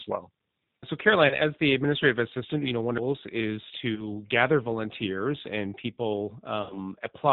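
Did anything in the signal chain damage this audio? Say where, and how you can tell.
Yes. G.729 codec, throughout: the speech is cut off at 4 kHz and sounds rough and synthetic, from 8 kbit/s coding that rebuilds it from filter and pulses.

VoIP packet loss concealed by the speech codec, on the network, at 1.27–1.38 s, 3.95–4.09 s and 6.62–6.79 s: each is stretched into a buzzy tone or coloured noise that fades as the decoder extrapolates over roughly 40, 20 and 80 ms of lost audio.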